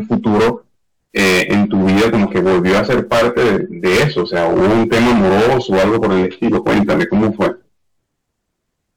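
Hard clipping runs through the whole speech clip. The level is pushed roughly 18 dB past what a stage in the chain can pass, so close to a third of the samples hit the ceiling and are sliced flat. Every loud syllable comes out as harsh, buzzy fuzz. On the waveform the peaks form flat plateaus on both the positive and negative swings, and the spectrogram shows dense harmonic energy smeared up into the high kHz range wherever the sound is loud.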